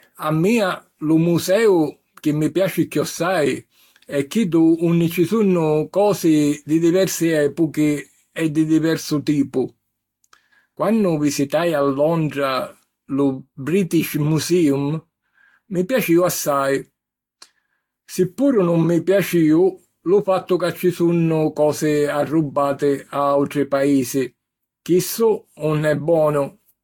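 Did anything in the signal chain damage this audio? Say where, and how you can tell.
Yes. The damage sits at the codec stage and runs through the whole speech clip. The sound is swirly and hollow, more smeared than a single encode at around 70 kbit/s would leave. Attacks are blurred, and nothing is present above 19.2 kHz. This is generation loss, likely from repeated decoding and re-encoding, about seven passes through a Vorbis-style encoder. Each pass quantises on a shifted frame grid, so the noise and spectral holes accumulate.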